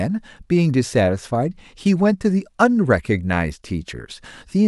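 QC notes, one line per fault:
No faults were heard in this speech clip. There is nothing to log against it.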